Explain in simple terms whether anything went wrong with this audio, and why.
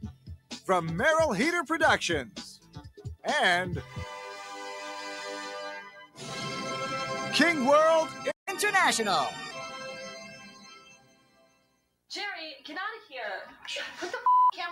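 Yes, several things went wrong. Throughout the clip, the level keeps swelling and sinking: held sounds and fading tails get pushed down while sharp starts come through. A noise suppressor applied to music or sounds is the cause. It was built for speech and treats steady tones and ambience as noise.

In four places the dips are much deeper. From 0.12 to 0.68 s, 2.56 to 3.24 s, 5.86 to 6.23 s, and for the longest stretch from 9.7 to 12.1 s, the sound audibly sinks or its decay is cut short. This is sound cut by the noise suppressor, which judged these steady or fading parts to be noise and turned them down harder than everything else.

At 8.31 s the audio drops out completely for about 0.15 s, then picks up again at 8.48 s. This playback stall was likely caused by the player running out of data, or being briefly blocked, so it had nothing to output until it recovered.

Right after the gap, from 8.48 to 9.51 s, everything plays faster and sounds higher, by roughly two semitones. 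This is catch-up at higher speed: the player runs at 1.15 times normal speed to make up the lost time, then settles back to normal.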